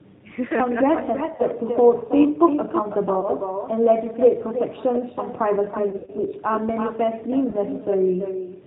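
Throughout, an echo with no canceller returns the speech about a third of a second late, about 7 dB down. It sounds quieter and thinner. The G.729 codec at 8 kbit/s removes everything above 4 kHz and makes the voice rough and synthetic. VoIP packet loss concealed by the speech codec appears at 1.36 to 1.43 s, 3.21 to 3.29 s, 5.90 to 6.10 s and 7.50 to 7.56 s. At each point the decoder stretches the last sound into a buzzy tone or coloured noise that fades. The 5.90 s gap is longest and most broken.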